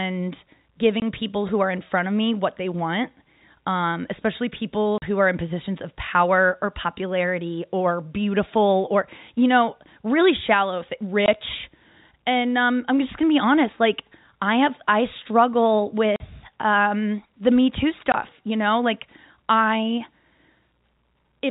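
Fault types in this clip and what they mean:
Packet loss filled with silence: brief hard-edged dropouts at 1.0, 4.98, 11.26, 16.16 and 18.12 s, lasting 20 or 40 ms. Each hole matches one or two missing 20 ms packets, which the receiver replaced with silence. One falls after "want um especially people", another after "I have I struggle".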